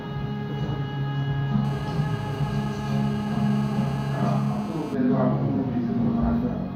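From 1.65 s to 4.95 s a hard, raspy buzz sits under the sound, steady throughout and rich in harmonics, about 16 dB below the signal. This is GSM phone buzz: a nearby 2G phone on a call transmits bursts 217 times a second, which the audio circuitry rectifies.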